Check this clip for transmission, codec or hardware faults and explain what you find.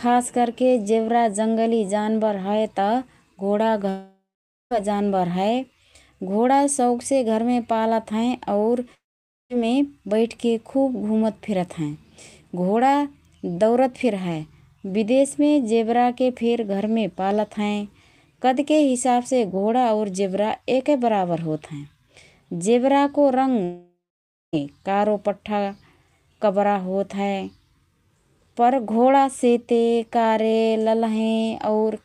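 Three gaps break up the speech, at 3.89 to 4.73 s, 8.95 to 9.52 s and 23.64 to 24.61 s. In each, the last sound smears into a fading buzz and then goes silent for about half a second. The speech resumes with roughly 0.82, 0.56 and 0.9 s missing. This is likely a long network dropout: packets stopped arriving, the receiver briefly extended what it last had, then gave up until the stream returned.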